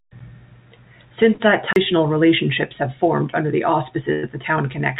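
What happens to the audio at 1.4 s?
At about 1.34 to 1.41 s there is a burst of packet loss. A run of speech packets failed to arrive in time, so the receiver stretched the last sound it had for about 52 ms while fading it down, giving a brief held, decaying tail. About 60 ms of the original speech never returns. Unlike a clean dropout to silence, the gap is filled with this smeared tail, and the speech resumes slightly ahead, with that piece skipped.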